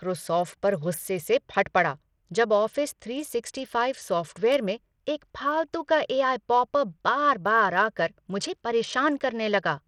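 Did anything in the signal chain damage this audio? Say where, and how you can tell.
Yes. The damage sits at the codec stage and runs through the whole speech clip. The treble is thin and flickers in and out, and a gritty, grainy noise rides on the sound with aliased edges. That points to Bluetooth SBC compression, likely at a small bit pool. The sound fits a low bitrate near 80 kbps. SBC splits the signal into a few wide sub-bands and gives the weak top bands few or no bits. The remaining bands are coarsely quantised.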